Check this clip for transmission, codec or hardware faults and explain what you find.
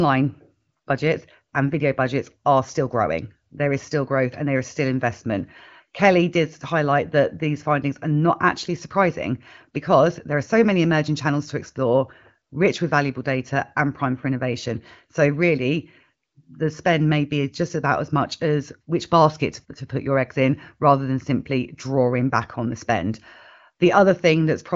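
Nothing wrong found: the speech is carried by AMR wideband (HD Voice) at 18.25 kbit/s, with no content above 7.3 kHz, as that codec's band limit implies.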